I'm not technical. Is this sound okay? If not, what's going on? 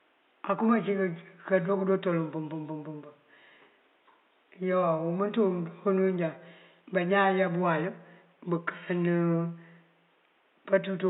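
Yes, nothing in this speech recording points to a fault; the faint background noise is just the room itself, sitting well beneath the voice.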